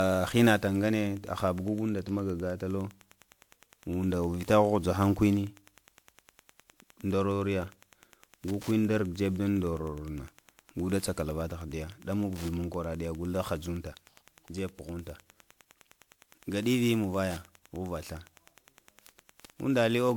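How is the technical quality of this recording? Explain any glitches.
The recording has two faults running through the whole clip of speech, one electrical and one from repeated coding.

Wi-Fi interference: a nearby Wi-Fi radio's signal is being rectified by the audio circuit. Its beacon, every 102.4 ms, becomes a faint, steady ticking about ten times a second, sitting roughly 30 dB below the speech from start to finish.

Generation loss: the audio was likely decoded and re-encoded about seven times with a lossy codec, which points to WMA at 128 kbit/s. Each pass adds fresh quantisation on a shifted frame grid, so the speech sounds swirly and hollow throughout, with smeared attacks, even though content extends to about 20 kHz.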